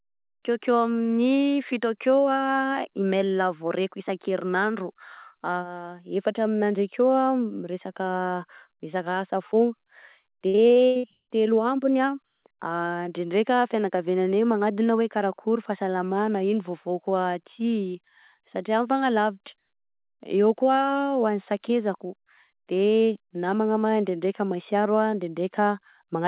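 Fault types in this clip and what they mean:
Repeated packet loss (robotic sound): packets kept dropping over about 0.8 s, each gap patched by extending the last sound, so the stretch before "telo ambiny" turns choppy and robotic.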